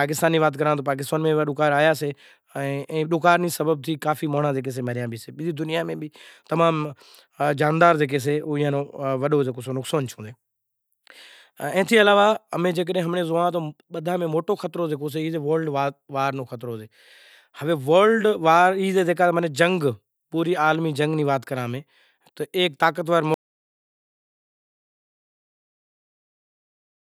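At 23.34 s the speech stops abruptly and never returns: an audio dropout to silence that runs to the end of the clip, about 3.7 s. The input was most likely lost, through a disconnected device or failed link, while recording carried on writing silence. There is no fade and no room tone, just dead air. On a waveform the trace collapses to a flat line; a spectrogram shows a sharp vertical edge followed by uniform black.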